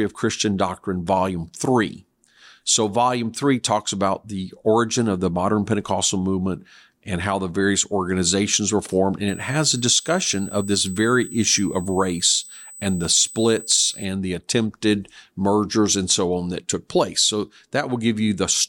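From 9.28 to 14.05 s, a USB whine sits under the speech. It is a steady, fixed-pitch tone at 8 kHz, about 20 dB below the speech. Current drawn in 125-microsecond bus microframes leaks through power or ground into the audio path.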